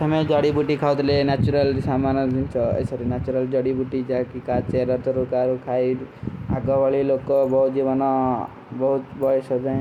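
No technical faults are audible.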